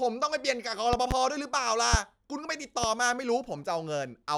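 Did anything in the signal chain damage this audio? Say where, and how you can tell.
Yes. Loud pops at 0.93–1.14 s (double), 1.94–1.97 s and 2.84–2.87 s, about 15–20 dB above the speech. These are voltage spikes added over the continuing sound, likely from the analogue wiring.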